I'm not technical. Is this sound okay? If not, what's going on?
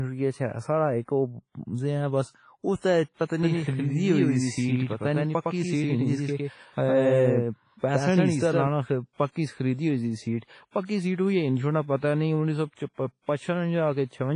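No. The audio was likely squeezed hard by WMA compression, a heavy data-saving format. The speech sounds washy and ringing, with hiss that moves with it and nothing above 10.5 kHz.

That same compression also causes pre-echo: it smears noise backwards before sudden sounds. You hear a short hiss, about 40 to 50 ms, before attacks at 2.76, 3.25, 10.71 and 10.85 seconds, the last two just before "سِیٹ ہوئی ہِنڈوَاڑا".

From 3.43 to 8.67 seconds there is a doubled audio track, likely a second copy mixed in. It is about as loud as the original and trails it by roughly a tenth of a second, then starts and stops abruptly.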